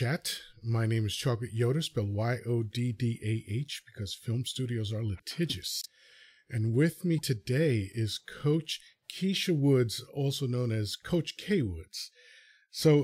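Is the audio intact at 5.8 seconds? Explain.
No. From 5.81 to 5.86 s the speech jumps ahead with a brief chirp, burst of noise or short hole, about two 26 ms frames long. A broken MP3 bit reservoir is the likely cause: after missing frames, the next frame borrows stale bytes from another frame's data.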